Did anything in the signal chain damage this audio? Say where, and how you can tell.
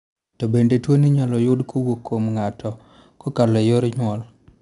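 Yes. The damage is at the codec stage: 4-bit ADPCM compression throughout. Coarse 4-bit prediction steps leave gritty noise that rises and falls with the speech, unlike steady hiss. Nothing above 10.6 kHz suggests roughly 89 kbps.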